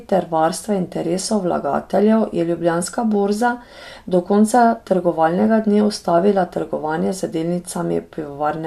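No technical faults can be heard anywhere in the recording.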